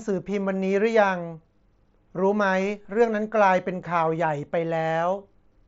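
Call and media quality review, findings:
Concealed Bluetooth headset packet loss at 2.82–2.85 s. Short gap, about 22 ms, filled in by the receiver. The sound there carries on as a brief buzzy, repeated texture at full level, then a slight warble as real audio resumes. The span fits a few lost mSBC frames. Mechanism: the phone repeats the best-matching recent waveform stretch instead of muting. Speech path is mSBC wideband, with light codec grain on loud parts.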